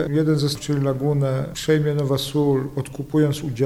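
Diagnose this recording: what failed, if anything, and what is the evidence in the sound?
Two faults here. First is computer activity noise in the analogue wiring: a faint buzzy chirp pulsing at around 150 times a second runs the whole way through, well down, maybe 45 dB under the sound. It's the computer's load swings riding the shared ground into the audio path.

Second is damaged data in a compressed stream, a codec or storage problem: a short blip at 0.55 s. Some bytes in that stretch were corrupted, so the decoder choked on those frames, lost sync and skipped ahead to the next clean header.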